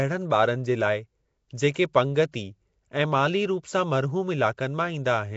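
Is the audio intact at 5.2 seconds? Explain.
No, at 5.2 seconds the speech carries Nellymoser compression, as it does through the whole clip. It sounds rough and hissy, with a smeared, underwater quality and nothing above about 7.7 kHz. That's likely the old Flash microphone codec, starving weak bands and filling them with noise.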